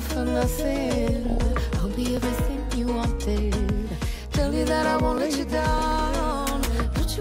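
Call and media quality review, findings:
DAB burbling at 1.27–1.38 s and 5.78–5.92 s. Short bursts of burbling over the programme, roughly a tenth of a second each. Probable component: DAB receiver or reception chain. Weak signal lets residual bit errors, around 0.2% and 0.15%, slip past error correction into the MP2 stream. Corrupted samples put short noise blips in single sub-bands, and corrupted scale factors make individual sub-bands jump in level for up to a frame.

Overlapping chunks at 2.17 s and 5.18 s. Brief click/stutter at each point, spaced 3.0 s apart. Probable component: chunked processing or transport stage. Each 3 s chunk begins about 7 ms before the previous one ends, so that 7 ms slice plays twice at the join, producing the discontinuity.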